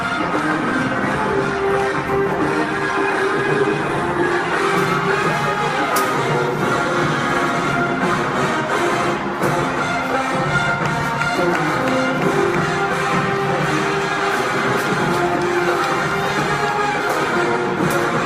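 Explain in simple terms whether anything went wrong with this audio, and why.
Nothing went wrong here: no faults can be heard anywhere in the recording.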